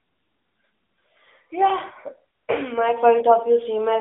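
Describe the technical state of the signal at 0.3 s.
At 0.3 s you're hearing AMR narrowband mobile codec damage, which runs through the whole clip. The speech sits in a phone band of roughly 300 Hz to 3.7 kHz, with nothing above 3.8 kHz, and the vocal-tract model adds a plainly audible buzzy, synthetic edge that fits a mid-rate mode around 10.2 kbps.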